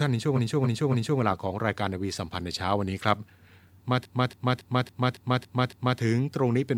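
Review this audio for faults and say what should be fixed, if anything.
Repeated frames stutter the speech from 0.35 to 1.19 s and again from 4.02 to 5.97 s. A 278.6 ms block, consistent with a run of six compressed frames, plays three, then seven, extra times, adding 0.84 s and 1.95 s. Spectrograms and waveforms show identical tiled segments. Prevent this by checking frame sequence numbers and discarding duplicates before decoding.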